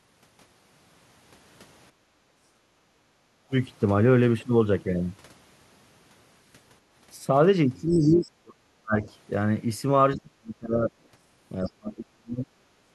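Speech recorded through a call path shows background gated by the echo canceller from 1.92 to 3.49 s. The room noise sinks by about 13 dB while the loudspeaker plays, then recovers. On a spectrogram this appears as a faint horizontal band of noise floor that dims and returns. The other side's voice leaking through is heard at 7.89 to 8.3 s, about 30 dB below the talker, and briefly at 11.04 to 11.08 s, about 40 dB down. The likely cause is residual echo the canceller failed to remove, showing as weak, separate harmonic traces. Speech suppressed in double talk follows at 7.9 to 9.07 s, 10.16 to 10.92 s and 11.63 s to the end. The voice drops by some 35 to 40 dB, likely because the canceller attenuated everything during overlap, and the waveform envelope collapses in chunks.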